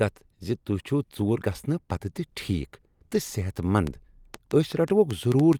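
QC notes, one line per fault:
3.87–5.54 s, train of clicks: roughly ten sharp, similar-shaped pulses at an uneven pace averaging about 4.8 per second, peaking around 10 dB above the speech and audible over pauses too. Likely interference pickup or an unstable interface injecting repeated transients.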